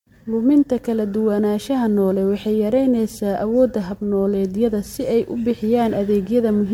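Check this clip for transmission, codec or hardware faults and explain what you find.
There is one codec fault, running through the whole clip: generation loss. The speech has a swirly, hollow, smeared quality, with consonant onsets blurred. This most likely comes from the audio being put through MP3 around five times, at a rate pointing to about 96 kbit/s. Each re-encode quantises on a shifted frame grid, so the noise and spectral gaps accumulate. A single 96 kbit/s pass would sound far cleaner, and since content still reaches 20 kHz, this is not a simple low-pass or band-limiting fault.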